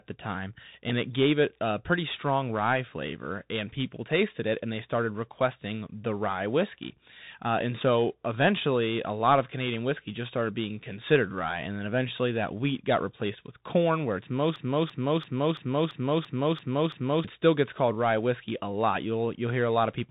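Bluetooth CVSD headset codec damage runs through the whole recording. The speech is squeezed into a narrow band with nothing above 3.8 kHz, which fits a 64 kbit/s one-bit delta coder. Its adaptive step size cannot keep up with loud, bright sounds, so s sounds turn scratchy and a granular hiss sits beneath everything.

A broken-record loop runs from 14.56 to 17.24 s. A 0.34 s fragment repeats exactly, back to back, eight times, and the speech that should have filled that stretch is lost. The likely cause is a stalled player, encoder or stream that kept resending its last buffered piece.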